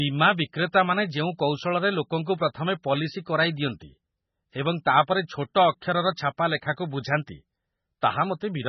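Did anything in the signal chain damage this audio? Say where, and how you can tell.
Yes, at the codec stage, throughout the speech. Nothing reaches above 5.9 kHz, and the tone is swirly and watery. Likely MP3 compression, fitting a very low bitrate near 16 kbps.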